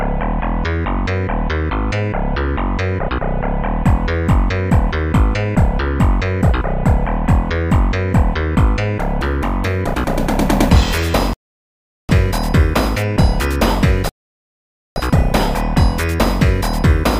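At 11.33 s the audio drops to silence until 12.09 s, and again from 14.09 s to 14.96 s. Both are rebuffering stalls: playback ran out of downloaded data, waited, then resumed exactly where it stopped. Nothing is skipped, but about 0.76 s and 0.87 s of dead time are added. On a waveform each stall is a flat gap. On a spectrogram it is a blank vertical band with no smearing at either edge.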